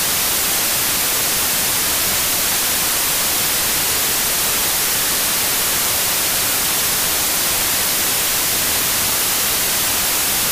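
From start to end, samples built from the wrong bytes turn low bits into loud broadband noise, a flat spectrogram wash and a dense waveform.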